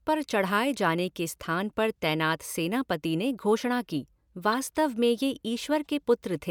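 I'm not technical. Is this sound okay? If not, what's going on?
No. Right after "सेनापति ने घोषणा की", at 4.52 to 4.54 s, there's a quick chirp. That's a corrupt frame decoded: damaged data got played anyway across a few frames.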